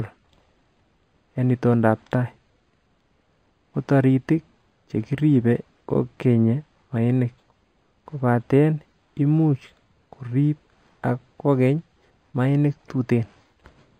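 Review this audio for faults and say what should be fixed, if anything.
Imaging from linear upsampling runs through the whole clip. The speech was brought up to a higher rate by joining samples with straight lines. That is a weak filter. Content stops near 5.5 kHz, which fits a source of about 11 kHz raised to 48 kHz. A faint mirror copy of the spectrum sits between 5.5 and 11 kHz, roughly 45 dB down. It adds a light metallic shimmer to sibilants.

To prevent it, resample from the original with a proper band-limited resampler rather than linear interpolation.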